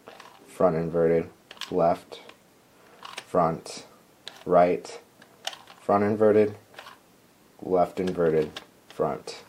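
No technical faults can be heard in this audio. Nothing in the recording points to a problem at any point.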